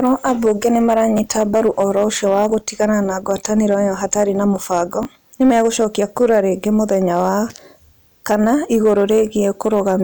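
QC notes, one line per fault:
throughout: hard clipping. Some stage in the chain is being driven about 4 dB past what it can pass, so the loudest peaks of the speech are cut flat instead of following their true shape. Only a small fraction of the samples go over, so the damage sits on the peaks: the flattened tops throw off harmonics high in the spectrum, heard as brief crackle and a gritty edge on the louder syllables.
1.17 s and 5.03 s: chunks out of order. At both points a 10 ms block of audio was delivered or written one block late and plays after the block that should follow it. No audio is lost, but the sequence is swapped for about 20 ms, leaving three hard joins each time. The result is a tiny jumbled stutter, just after "ambunge nĩ" and again between "ĩyo hatarĩ na mũbango" and "nĩ megũcokia kura rĩngĩ".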